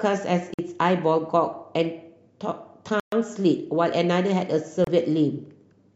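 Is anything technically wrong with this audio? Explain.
Yes. The speech drops to silence three times: 0.54 to 0.59 s (about 50 ms), 3.00 to 3.12 s (125 ms), and 4.84 to 4.87 s (about 30 ms). These are likely Bluetooth stalls, where delayed packets starve the receiver's buffer. Playback halts briefly, then resumes.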